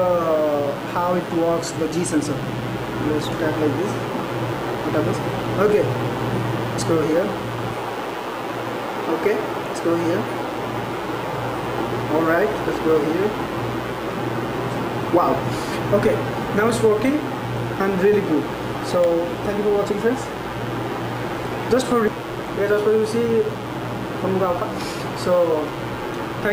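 Mains buzz runs throughout. Switching spikes at twice 60 Hz leak in, spreading harmonics upward. It sounds like a steady, raspy buzz sitting roughly 25 dB below the signal.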